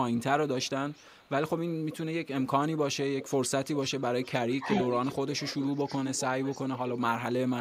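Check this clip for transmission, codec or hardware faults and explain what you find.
Two faults are audible: echo leak and speech suppressed in double talk.

Echo leak appears at 0.15–0.21 s, 0.61–1.5 s, 2.76–7.01 s and 7.56 s to the end. A copy of the speech returns about 335–380 ms late. It is very faint early on and reaches roughly 10 dB below the speech in the long middle stretch. The likely cause is a loudspeaker-side echo canceller passing residual pickup back.

Speech suppressed in double talk occurs at 4.62–4.68 s. The speech dips briefly by around 5 dB while the echo overlaps it, likely because the canceller attenuated both signals.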